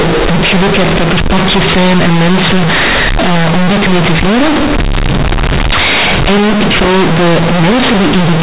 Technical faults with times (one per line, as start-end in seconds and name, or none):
0.00-8.42 companded audio read as linear